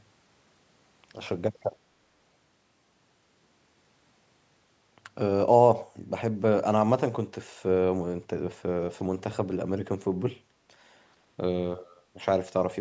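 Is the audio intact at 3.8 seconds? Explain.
Yes, at 3.8 seconds the speech is intact, with no dropout, click or distortion, only the normal band limit of call microphone processing, which leaves nothing above 8 kHz.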